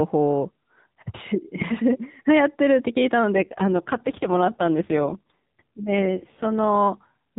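At 3.34 s the speech turns rougher and more synthetic. This is an AMR rate drop. The mobile link forces the AMR narrowband codec down to a lower rate, and the pulse model gets fewer bits to describe each frame. The roughness fits a fall from 12.2 to 4.75 kbps. The bandwidth stays capped at 4 kHz, and there is no gap. The buzzy quality lasts until 6.76 s, when the rate recovers.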